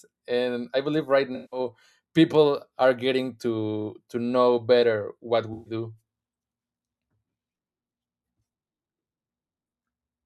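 AAC frame loss with concealment at 1.35–1.60 s, after "I believe right", and 5.53–5.74 s, after "to know better what": the decoder fills lost frames from prior spectra, giving smeared, phasey patches.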